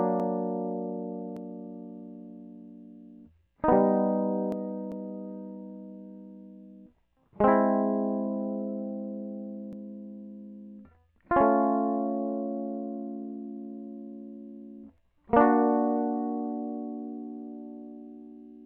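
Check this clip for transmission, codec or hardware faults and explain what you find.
Three jumps occur, at 1.37, 4.52 and 9.73 s. Each is a point where the music skips ahead, likely a dropped buffer (overrun), losing about a tenth of a second, or about 0.3 s at 4.52 s.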